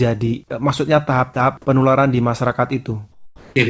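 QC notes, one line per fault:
1.34–1.36 s and 3.12–3.56 s, sound dropped by the voice detector: steady comfort noise replaces the signal for 20 ms, then 440 ms, likely because the sender's detector took it for background. The waveform flattens to an even low band, and the spectrogram shows featureless noise.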